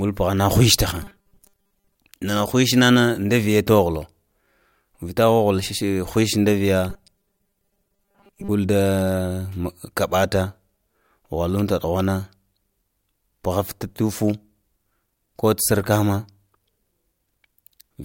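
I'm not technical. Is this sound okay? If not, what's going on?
No. From 1.03 to 1.95 s and again from 6.9 to 8.5 s, the speech turns into a flat, metallic buzz at 200 Hz: robotic sound from repeated short buffers. Audio likely arrived too slowly, so the software looped tiny 5 ms scraps and replaced most of the real speech.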